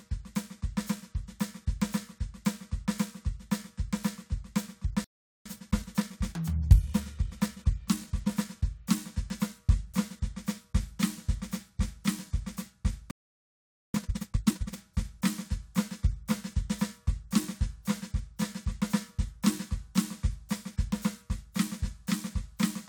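At 5.04 s the music cuts out and stays silent until 5.46 s, a gap of about 410 ms. A second, longer silence runs from 13.11 to 13.94 s, about 830 ms. Both are playback stalls, most likely the player running short of data or its output thread being held up. On a waveform each shows as a flat line between two abrupt edges. On a spectrogram each is a clean vertical band of empty frequency content.

Each stall is followed by time-compressed catch-up, as the player trims its backlog by dropping short slices and cross-fading the joins. From 5.46 to 8.46 s the music runs at 1.1 times normal speed, slightly hurried. From 13.94 to 14.76 s it runs at twice normal speed, audibly rushed, though the pitch holds steady. On a spectrogram the harmonics stay at the same heights while events crowd closer together, with small smeared seams at the splices.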